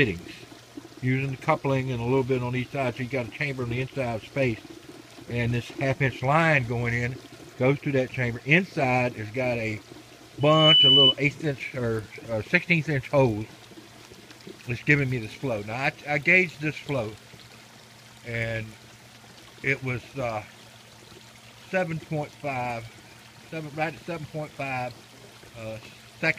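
At 10.40 s a loudspeaker feedback squeal kicks in: a 3 kHz tone swells up over about a third of a second to roughly 10 dB above the rest of the audio, then stops at 11.15 s. The mic was catching its own speaker, and the loop ran away at that pitch.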